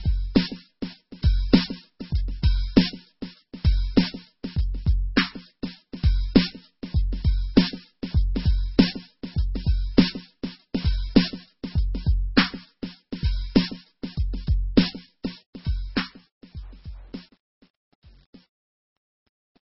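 Throughout the music, nothing is heard above 5.6 kHz, with heavy watery, swirling artefacts and smeared attacks, likely from MP3 compression at a bitrate that fits about 16 kbps. From 15.23 s to the end, the fade shows truncation distortion: the level is stepped with too few bits and no dither, consistent with a 9-bit word length. It turns gritty from 15.77 s onward.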